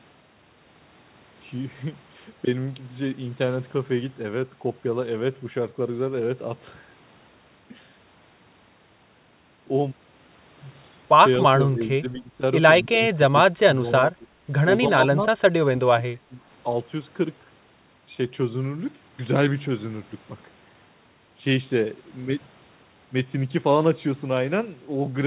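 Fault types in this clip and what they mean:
Speech suppressed in double talk: The voice dips and breaks into short pieces between 11.4 and 16.4 s. Some drops are about 10 dB, others about 25 dB deep. The likely cause is an echo canceller turning down both its own talker and the loudspeaker echo while both sides talked.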